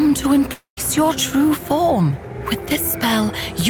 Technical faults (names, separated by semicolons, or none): long network dropout